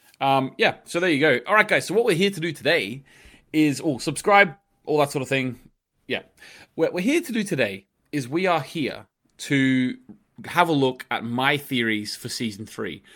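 No technical faults are audible.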